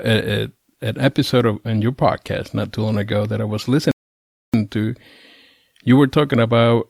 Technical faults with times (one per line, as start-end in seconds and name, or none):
3.91-4.54 rebuffering stall